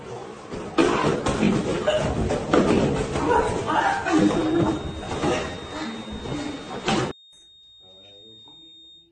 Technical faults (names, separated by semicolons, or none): feedback whistle